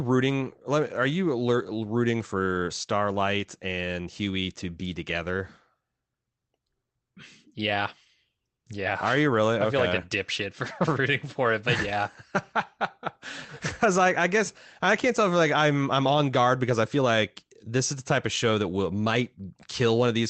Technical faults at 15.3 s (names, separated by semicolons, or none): none